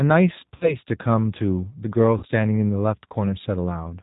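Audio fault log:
Throughout: G.729 codec. The speech is band-limited with no content above 4 kHz, and it sounds noticeably rough, thin and synthetic. This fits an 8 kbit/s G.729A stream, which rebuilds each 10 ms frame from a vocal tract filter, a pitch predictor and a few pulses rather than the actual waveform.
0.56–0.77 s and 2.18–2.27 s: VoIP packet loss concealed by the speech codec. Each time, the speech smears into a buzzy tone or coloured noise that fades, and then stays weak and distorted for a while. This is consistent with about 50 ms of lost audio each time. The decoder stretched out its last pitch and filter with falling gain, then took several frames to recover.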